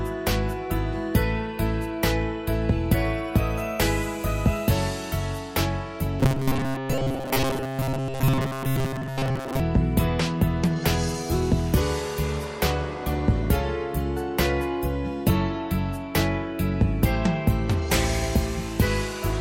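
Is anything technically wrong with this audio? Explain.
Yes. From 6.20 s to 9.60 s the sound collapses into robotic sound from repeated short buffers: a rigid, metallic buzz fixed at 133 Hz that only loosely tracks the original. The likely cause is audio arriving too slowly, so playback keeps looping a fragment of about 7.5 ms (one over 133 Hz) in place of the missing material, with most of that stretch made of repeats. Unlike a comb-filter or flanging effect, the buzz pitch never moves, and the skipped audio is lost rather than merely colored.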